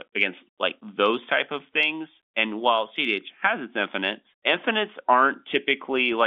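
Nothing goes wrong anywhere in this speech, which simply carries the narrow band of ordinary G.711 telephone coding, with the sound sitting between roughly 300 Hz and 3.5 kHz the way a fixed phone line would deliver it.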